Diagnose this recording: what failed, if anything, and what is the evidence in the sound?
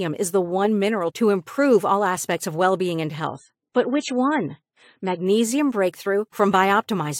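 Right after "of well being and", 3.27 to 5.27 s turns dull above 9 kHz and artefact-laden without a gap: network-side adaptive stream at a lower bitrate.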